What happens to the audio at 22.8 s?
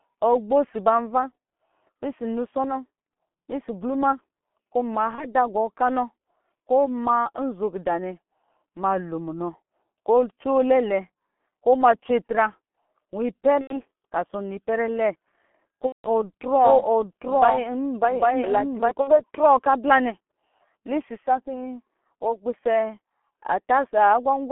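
At 22.8 s the speech sounds muffled and hoarse with smeared consonants, as it does throughout: G.723.1 coding at 6.3 kbit/s keeps only 200 Hz to 3.4 kHz.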